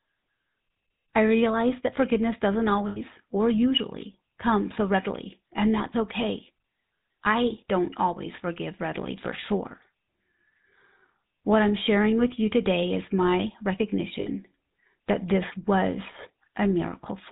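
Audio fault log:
Throughout: GSM full-rate codec. The speech has that plainly audible buzzy, gravelly edge, and nothing comes through above 4 kHz. The coder models the vocal tract and excites it with sparse, evenly spaced pulses, which fits a 13 kbps full-rate stream.
2.88 to 2.98 s and 14.20 to 14.28 s: lost GSM frames. Right after "realize that forgiveness doesn't", about 80 ms goes missing, and around 14.2 s another 60 ms does. Each gap becomes a rough, metallic ring while the decoder keeps repeating the last good frame.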